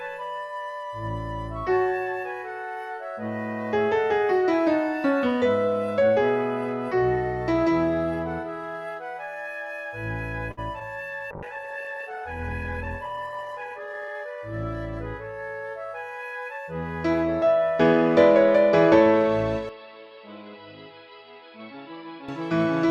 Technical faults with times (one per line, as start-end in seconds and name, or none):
10.51-10.59 short stall from a late packet
10.79-10.82 short concealed packet loss
11.32-16.60 call bitrate drop
13.72-14.15 jitter buffer speed-up
19.69-22.29 input switched to a poorer device